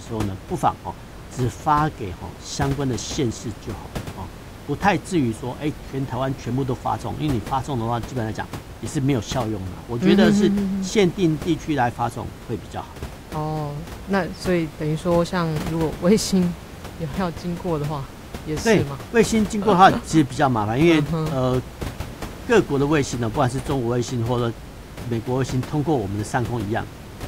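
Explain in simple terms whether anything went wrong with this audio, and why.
Nothing went wrong; no faults can be heard anywhere.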